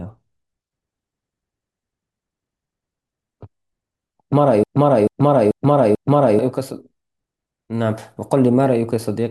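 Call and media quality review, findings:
Broken-record loop, 4.64 to 6.39 s. Speech halts and one fragment of about 0.44 s repeats exactly, back to back, four times. Speech that belonged in that span is missing. Likely cause: a stalled player, encoder or stream resending its last buffered fragment. Normal playback resumes at 6.39 s.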